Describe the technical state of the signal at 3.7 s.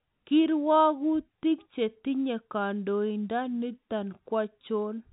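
At 3.7 s the speech is intact, with no fault, only the normal narrow telephone band of G.711 coding.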